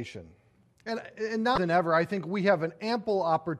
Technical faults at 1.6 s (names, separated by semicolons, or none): damaged data in a compressed stream